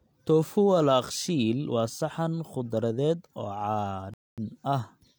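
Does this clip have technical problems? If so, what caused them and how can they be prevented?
Yes. Near the end, the speech abruptly drops to silence at 4.14 s and picks up again at 4.38 s, continuing from exactly the point where it stopped, so nothing is missing but about 0.24 s of dead air is inserted. This is a rebuffering stall: the player used up the audio it had already downloaded and had to wait for more data before it could resume. A larger playback buffer or adaptive bitrate streaming would prevent it.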